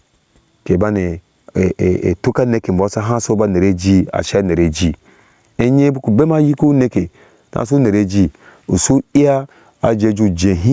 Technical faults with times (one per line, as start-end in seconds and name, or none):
0.00-10.73 gain pumping